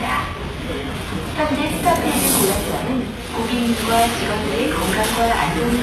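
From the first moment to the end, the whole thing carries HE-AAC compression damage, and it's plainly audible. The top end stops dead at about 12.3 kHz, and the treble below that has a gritty, metallic sheen that doesn't quite belong to the sound underneath. That's likely band replication at work: the upper bands are rebuilt from copied lower ones rather than coded, so they don't line up. The heaviness points to a very low bitrate, around 16 kbps.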